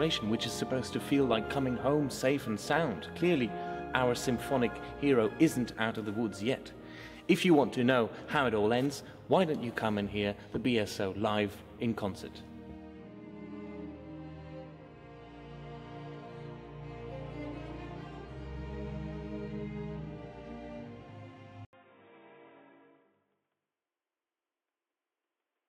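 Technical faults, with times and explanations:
21.65 to 25.68 s, input switched to a poorer device: after a gap of about 80 ms the sound turns dull and boxy for the rest of the clip, with nothing above 3.8 kHz and the level dropping roughly 5 dB. A faint new background noise sits well beneath the signal. The likely cause is the recording input jumping mid-take to another microphone or a headset's call profile, whose narrower band, different gain and own noise replace the original pickup.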